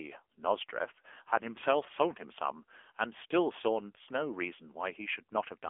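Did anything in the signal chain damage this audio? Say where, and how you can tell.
Yes, the codec stage: the AMR narrowband mobile codec throughout. The spectrogram shows nothing above 3.6 kHz. The speech is plainly buzzy, consistent with a low bitrate near 8 kbps.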